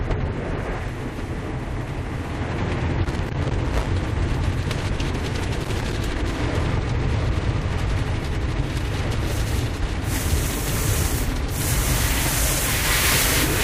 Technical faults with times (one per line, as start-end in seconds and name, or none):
0.96-1.00 compressed frames skipped
1.97-2.00 corrupt frame decoded
3.05-3.87 loose connector crackle
5.55-5.93 loose connector crackle
11.01-11.17 loose connector crackle